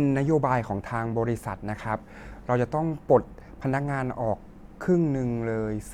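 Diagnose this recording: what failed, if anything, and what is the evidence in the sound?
Nothing in the chain has failed: the speech signal arrives intact and continuous, with nothing in the sound that points to a problem at any stage.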